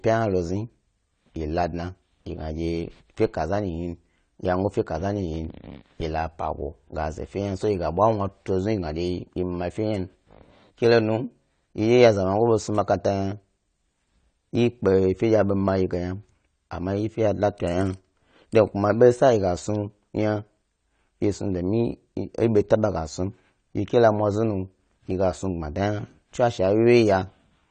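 Speech with plainly audible AAC compression damage throughout: nothing reaches above 9 kHz, leaving a dull top end, and sibilants take on a smeared, fizzy texture. The likely cause is AAC-LC encoding at a low bitrate, consistent with roughly 32 kbps.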